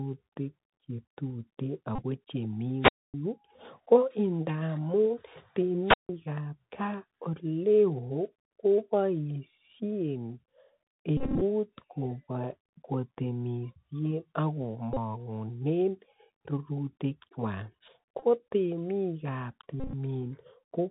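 Bluetooth CVSD headset codec damage runs through the whole speech clip: the one-bit adaptive coding cuts everything above 4 kHz, roughens sibilants and lays granular hiss underneath. Bluetooth headset packet repeated faults occur at 1.95, 11.17, 14.94, 18.20 and 19.80 s. Replayed packets every 3.75 ms buzz near 267 Hz, with the longest spread over 240 ms. Wireless microphone squelch dropouts at 2.80 s (about 257 ms mute) and 5.84 s (about 155 ms) sound like a hiss rise and a near-silent hole as the radio signal fades.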